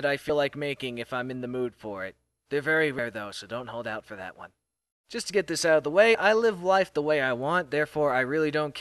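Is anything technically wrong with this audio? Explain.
Yes. Compressed frames are skipped at 0.29 s, 2.98 s and 6.14 s, dropping roughly 50, 100 and 30 ms of audio. Missing or rejected frames, fitting a 26 ms frame length, make the sound jump ahead, and the overlapping frames smear each join into a brief blip.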